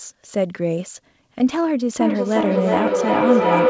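A speech clip where, from 2.0 s to the end, a feedback howl near 500 Hz swells to about 4 dB above the speech, with a loop delay of roughly 0.4 s. Two devices on the call are looping microphone into loudspeaker with gain above unity. The call path's cutoff at 8 kHz points to a wideband codec.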